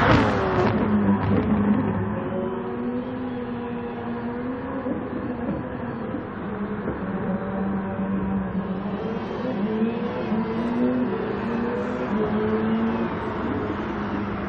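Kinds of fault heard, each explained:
No technical faults can be picked out anywhere in the signal, which holds steady as a single continuous stream throughout.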